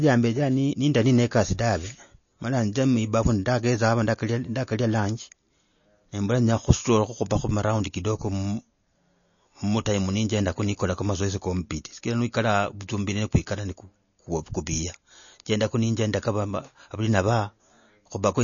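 From start to finish the speech is band-limited, with nothing above 7 kHz, and sounds watery and swirly, with chirpy sibilants. This is likely MP3 compression at a bitrate near 32 kbps. A spectrogram shows a flat ceiling at 7 kHz and patchy, flickering gaps below it.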